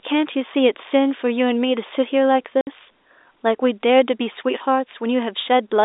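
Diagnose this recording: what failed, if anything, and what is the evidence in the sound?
Network packet loss filled with silence: a 60 ms hole at 2.61–2.67 s, consistent with two 30 ms packets, shows as a blank vertical gap with sharp edges over the narrow telephone band.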